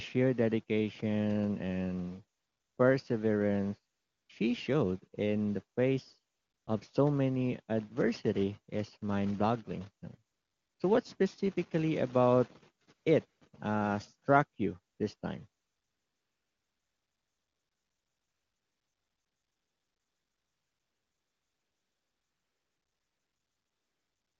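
This speech clip, carried over an AMR-WB (HD Voice) link that sounds clean enough to point to its highest rate, suffers from AMR comfort noise. Nine times between 2.37 s and 15.61 s the phone judged the talker silent and stopped sending speech frames, for gaps of 20 to 480 ms, and from 15.61 s to the end it sent none for about 8.8 s. The receiver filled each gap with smooth synthetic noise, so the real background is replaced by noise that switches in and out.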